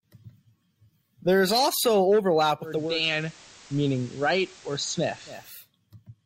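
A speech recording in which, just after "is also overlap" at 2.59 s, a hybrid receiver loses its digital stream and blends to the FM analogue broadcast until 5.70 s. This digital radio blending to analogue crossfades over about 0.45 s, drops the level by about 1 dB, and adds hiss roughly 25 dB under the signal.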